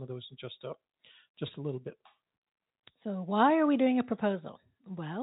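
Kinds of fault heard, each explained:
No faults can be heard in this speech.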